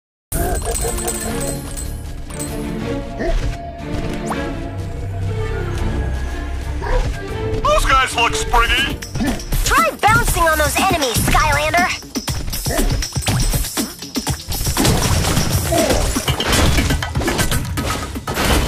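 For the first 0.32 s there is only digital silence, then the sound appears abruptly at full level, already underway, with no natural attack or fade-in. This is a cut-off start: capture or streaming began late, so the opening of the sound was never recorded.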